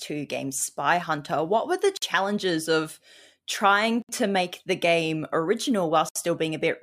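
Silences open at 1.97 s after "were the" (50 ms), at 4.02 s between "of trying" and "to make the game" (67 ms), and at 6.09 s (67 ms). Each is a gap at a join of encoded pieces. They recur every 2.0 s, so pieces were encoded separately and joined untrimmed, with encoder delay and padding left in. The codec smears their edges. Speech resumes where it stopped.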